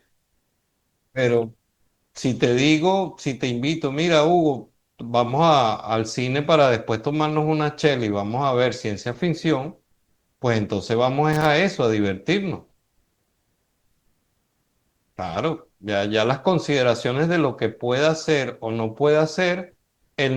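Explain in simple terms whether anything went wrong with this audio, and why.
At 11.33 to 11.46 s there is loose connector crackle: a brief scratchy burst where a poor contact in the cable or plug briefly breaks the speech.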